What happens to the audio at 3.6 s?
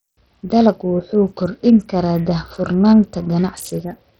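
At 3.6 s the speech carries the same heavy coding damage present from start to finish: the treble thins and flickers, and a gritty, grainy noise with aliasing rides on the sound. This is likely Bluetooth SBC compression at a low setting, which fits a bitrate around 64 kbps. SBC splits the signal into a few wide sub-bands and hands out bits without a hearing model, so the weak upper bands starve while the rest are coarsely quantised.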